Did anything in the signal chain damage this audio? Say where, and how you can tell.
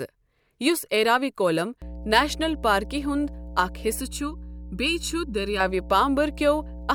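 Yes. Mains hum comes in at 1.82 s and continues to the end: a steady 60 Hz tone with low harmonics, roughly 15 dB below the speech. That points to the analogue wiring, with a ground loop or nearby transformer leaking the power line in. Its fixed pitch and constant presence separate it from rumble or handling noise.

Channel delay (comb filtering) makes the speech hollow and phasey from 4.00 s to 5.60 s. One channel runs late by under a millisecond before the two are summed to mono, so the shared sound cancels at evenly spaced frequencies, the first notch near 700 Hz. The notches stay fixed, unlike a sweeping phaser or codec smearing.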